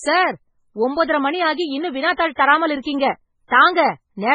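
From start to finish the speech has a watery, swirling texture and nothing above about 10.1 kHz, with faint high detail flickering in and out. That is likely heavy MP3 compression at a very low bitrate, around 16 kbps, which cuts the treble and drops weak frequency lines frame by frame, unlike a plain low-pass filter, which would leave the remaining sound steady.

At 2.13 to 2.18 s and again at 3.48 to 3.51 s, a short hiss comes just ahead of a sharp onset, spreading over 53 ms and 35 ms, and the attack itself sounds softened. This is pre-echo: the codec spread noise meant for the loud attack across the quiet stretch before it. Because the hiss comes before the attack, not after it, this is not reverb or a tail.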